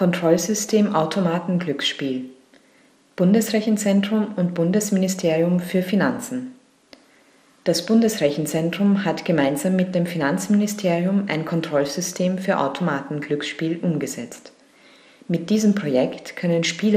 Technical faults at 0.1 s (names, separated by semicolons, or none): MP2 compression